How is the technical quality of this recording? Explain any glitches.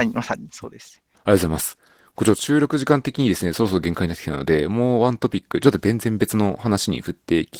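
The technical quality is limited by one fault that runs through the whole clip. Opus voice compression is plainly audible from start to finish. The speech sounds hoarse and slightly robotic. The sound points to a low bitrate, around 16 kbps. At that rate the linear-prediction coder codes the excitation coarsely, which roughens the speech. A thin upper layer keeps the highs present.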